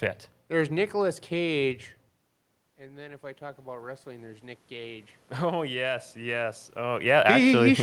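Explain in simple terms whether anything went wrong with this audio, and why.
From about 2.78 to 6.68 seconds, the voice and the room noise behind it slowly swell louder together. That is automatic gain rising: the talker moved back around 2 seconds, so the system gradually turned its volume up to compensate.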